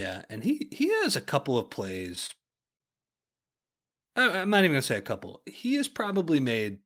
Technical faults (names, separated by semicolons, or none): repeated stalls (stutter)